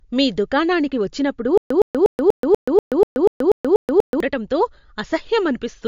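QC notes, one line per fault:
Throughout: MP3 compression. Nothing is heard above 7.2 kHz, and the damage is plainly audible. The sound turns watery and swirly, and attacks smear. This is likely lossy MP3 coding at a low bitrate, around 56 kbps, which cuts the treble and drops weak detail.
1.58 to 4.20 s: stutter with silent gaps. A 114 ms burst repeats 11 times at an even 243 ms pace, with 129 ms of digital silence between repeats. The likely cause is a stalled player that replays its last fragment at each retry. The audio meant for this span is lost.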